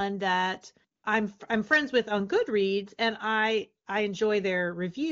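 From 0.95 to 1.03 s, just before "I'm I'm friends with", AMR comfort noise briefly replaces the real background. For about 80 ms the phone treated the talker as silent and stopped sending speech frames, so the receiver generated smooth synthetic noise from a rough level and spectrum estimate. Unlike a dropout, the gap isn't dead silence. It has a steady, featureless hiss that switches in and out abruptly against the surrounding clean wideband sound.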